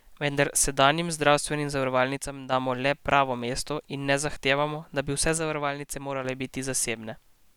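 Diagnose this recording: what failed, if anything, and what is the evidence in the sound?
One channel drops out, likely from an intermittent analogue connection: after "sedanjim zdravstvenim", 2.17–2.52 s, and again 5.38–6.25 s, the mono speech dips abruptly by about 6 dB.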